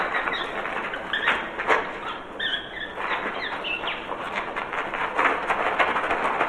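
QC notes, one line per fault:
throughout: clock drift between sender and receiver. The sending device's clock runs roughly 4 percent faster than the receiving end's, so audio arrives slightly quicker than it can be played. The jitter buffer keeps filling, and the receiver has to discard small pieces to avoid overflowing. Unlike packet loss, there is no gap or concealment smear. The timing slips steadily in one direction for the whole clip rather than at isolated moments.
0.07 to 6.37 s: repeated timing corrections. To keep pace with the faster sender, the receiver repeatedly trims short slices from the stream, giving an effective playback rate of 104 percent across nearly the whole clip. Each trim is tiny, heard as a faint hiccup or a slightly hurried, uneven tempo. Network jitter produces random stretches and squeezes. Here every edit shortens the audio and they recur at uneven intervals, which points to clock compensation rather than delay variation.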